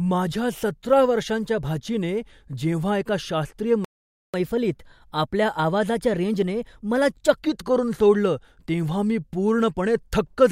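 At 3.85 s, just after "एका शास्त्रीय", the speech cuts out for about 0.49 s, a playback stall, likely the player running short of buffered data. The waveform drops to a flat line and the spectrogram shows a clean vertical blank band.

From 4.34 s to 7.34 s the player does a catch-up at higher speed, running at 1.1 times normal rate until just before "करून सोडलं तेव्हा मी". Resampling raises the pitch by roughly one and a half semitones. On a spectrogram the harmonics sit visibly higher and the syllables are compressed in time, then both return to normal.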